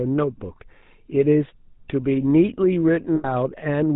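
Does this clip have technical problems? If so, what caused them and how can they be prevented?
Yes. Throughout the speech there is a plainly audible buzzy, gravelly roughness, and nothing is heard above 4 kHz. That is the sound of the GSM full-rate codec. It rebuilds the voice from a vocal-tract model driven by evenly spaced pulses, keeps only a third of the excitation detail, and discards the upper band. The coarseness fits a 13 kbit/s rate. Prevention: carry the call over a wideband or higher-rate codec instead of GSM full rate.

From 3.16 to 3.28 s the sound turns into a rough, metallic ring that holds for about 80 ms instead of continuing naturally. These are lost GSM frames. The decoder replaced each missing frame by repeating the settings of the last good one, which produces that smeared ring. The length fits roughly four consecutive 20 ms frames. Prevention: reduce radio-link errors or add stronger error protection and interleaving so bursts of frames arrive intact.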